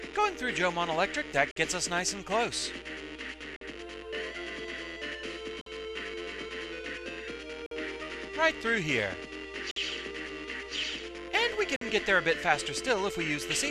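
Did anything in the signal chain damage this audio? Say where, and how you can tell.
Yes. A gap between chunks, at the chunked transport or playback stage: 50 ms silent holes at 1.51, 3.56, 5.61, 7.66, 9.71 and 11.76 s, spaced every 2.05 s. Each is a flat-line notch with hard edges in the waveform and a blank vertical stripe on a spectrogram, from silence inserted between 2 s chunks.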